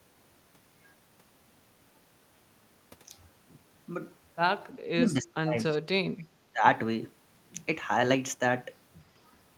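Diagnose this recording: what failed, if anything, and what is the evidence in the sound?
Speech suppressed in double talk, from 4.69 to 5.58 s, again from 6.14 to 6.32 s, and from 6.53 to 6.64 s, is a call-processing fault. The speech dips sharply, losing around 0.7 s in total during the first stretch, by about 35 dB at its deepest, and by about 30 and 20 dB in the later two. The likely cause is an echo canceller that, with both ends talking, treated the near talker as echo and attenuated everything.

Echo leak appears at 5.71 to 5.77 s, also in call processing: a brief, faint copy of the speech returns 326 ms late, at about 25 dB below the direct sound, heard as a short scrap rather than a full repeat. This is likely a loudspeaker-side echo canceller failing to fully remove what its microphone picked up, so a residue was sent back down the line.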